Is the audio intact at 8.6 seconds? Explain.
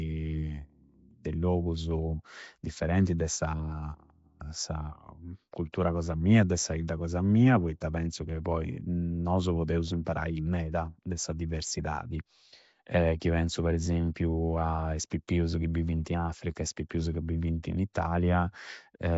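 No. Throughout the clip, including 8.6 s, a rough, hissy, underwater smear points to likely Nellymoser compression: coarse blocks leave weak bands noise-filled, and a spectrogram shows nothing above 7.7 kHz.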